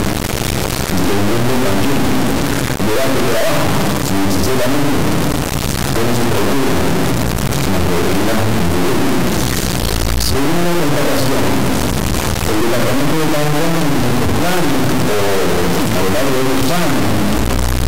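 A harsh, extremely loud buzzing runs through the whole clip, like a square wave slammed between silence and the clipping limit, dropping out to nothing wherever the underlying sound gets very quiet. This is integer read as float: samples written as 32-bit integers are being interpreted as 32-bit floats, so their bit patterns decode to values that are either almost zero, invalid, or vastly beyond full scale, and the output lurches between those extremes for its entire length.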